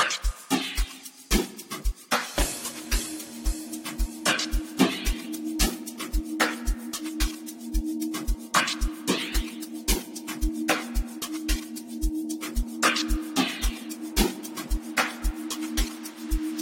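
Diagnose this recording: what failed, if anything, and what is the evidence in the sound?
For the first 6.0 s the top end is dull and smeared, with the swirly, watery artefacts of a starved encoder. At 6.0 s the treble and clarity snap back with no gap or dropout. This is an adaptive stream starting at a low bitrate, at the playback and network stage. The player opened on a cheap rendition to start quickly, then switched up once it had measured the connection. The contrast fits roughly a 62 kbit/s MP3 stepping up to about 128 kbit/s.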